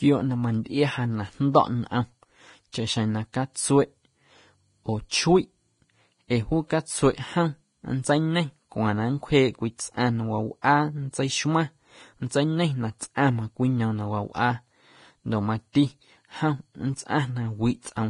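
Throughout, the speech is hissy and grainy, with nothing above 10.5 kHz and a roughened treble, the heavy damage of Vorbis compression, likely at a bitrate around 30 kbps. Unlike broadband noise, the hiss comes and goes with the signal's own energy.

Pre-echo strikes at 2.72 s, 10.62–10.64 s, 13.15–13.18 s and 15.73–15.75 s. Each is a 19 to 28 ms smear of noise just before a sharp attack. Unlike a click or reverb, it comes before the onset, not after.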